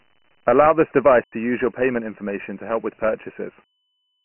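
Speech carried through Dialogic VOX ADPCM, with heavy coding damage: 4-bit adaptive steps leave a gritty hiss riding on the speech, and nothing survives above 3 kHz, which fits 6,000 samples a second at roughly 24 kbps inside a 150 to 3400 Hz line band. From 1.24 to 1.32 s a block of digital silence cuts the sound out for about 85 ms. The length fits a 4096-sample output buffer that went unfilled in time.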